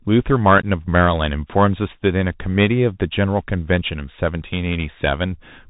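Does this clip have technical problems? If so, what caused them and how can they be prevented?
Yes. Throughout the speech there is Bluetooth CVSD headset codec damage, plainly audible, which fits a 64 kbps CVSD link. The codec sends one up-or-down bit per sample with an adapting step, so loud, fast, high sounds outrun the step: s sounds turn scratchy and a granular hiss sits underneath. A spectrogram shows a hard ceiling near 4 kHz with a speckled noise floor, and the waveform looks stair-stepped with slewed edges. Using a wideband headset profile (mSBC or better) or a wired microphone prevents it.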